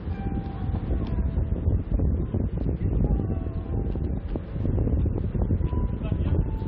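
No technical faults are audible.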